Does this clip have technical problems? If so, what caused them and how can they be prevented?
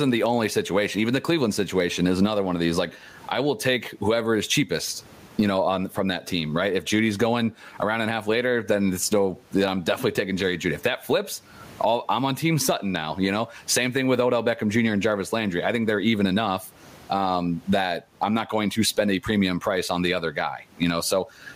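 Yes. Gain pumping runs through the whole clip. The room noise, about 42 dB below the speech, is part of the recording; the gain swings by around 20 dB, flattening the speech. The likely cause is mic gain set far too high, so a fast limiter or compressor keeps pulling it down. Unlike a noise gate, the background never cuts off. To prevent it, lower the input gain and use gentler, slower compression.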